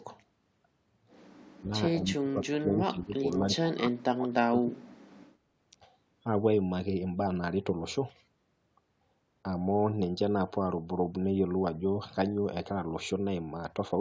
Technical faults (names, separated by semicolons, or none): speech suppressed in double talk